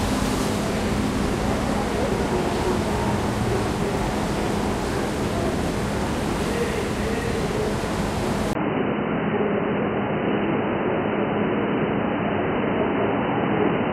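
At 8.53 s the input likely switched to a poorer device, one passing nothing above 3 kHz. After a brief 20 ms gap, the sound turns dull and boxy through to the end, with a faint new background noise and much the same level.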